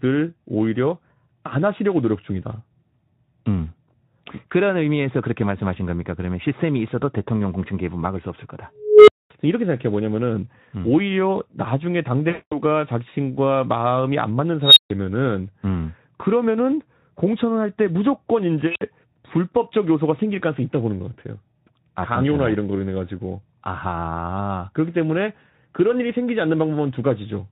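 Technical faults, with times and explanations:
8.80–9.30 s, 14.63–14.90 s, 18.49–18.81 s: unstable filter. A recursive filter's output runs away, swelling a low tone near 400 Hz, then tones around 4 kHz and 5 kHz. Each grows loud over about 0.27 s, 0.14 s and 0.26 s, clips, then drops into silence for about 0.23 s, 0.14 s and 0.06 s while the filter resets.
12.29–12.61 s: VoIP packet loss concealed by the speech codec. About 220 ms of packets goes missing, consistent with eleven 20 ms frames. The speech decoder extrapolates from its last pitch and filter state, so the sound stretches into a fading buzzy tone or coloured noise and stays weak as the stream recovers.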